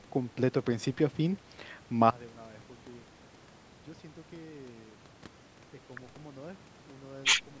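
Speech heard through call microphone processing, with the lowest bass trimmed and nothing above 8 kHz. At 2.11 s a sudden gain jump drops the level by about 24 dB until the end. Speech and background noise fall together in one step, likely from a gain setting applied without a ramp. Automatic gain control would instead slope gradually and recover.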